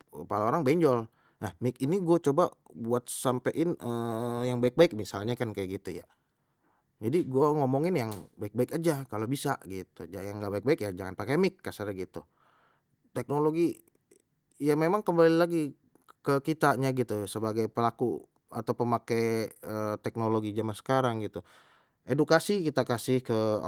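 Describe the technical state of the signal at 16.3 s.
At 16.3 s the signal is intact, with nothing at that moment beyond the light, full-band Opus voice compression that carries the speech.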